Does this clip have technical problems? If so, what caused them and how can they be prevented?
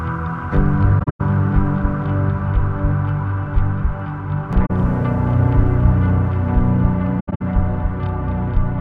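Yes, there's AAC frame loss with muting: soft-edged dropouts at 0.99–1.21 s and 7.19–7.42 s, each broken holes up to about 0.1 s, plus a short gap at 4.65–4.71 s. The decoder zeroed the missing frames, and the overlapping windows fade smoothly in and out. Adding error protection or retransmission on the transport prevents it.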